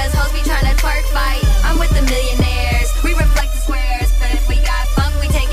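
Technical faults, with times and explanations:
3.41 to 4.85 s, channel delay (comb filtering): for this stretch the sound turns hollow and phasey, then returns to its fuller tone. One channel arrives roughly 3 ms behind the other, and when the pair is folded to mono the shared content cancels wherever the two copies meet out of phase. That carves a series of evenly spaced notches, the first somewhere around 150 Hz, lending the whole band a tubular colour.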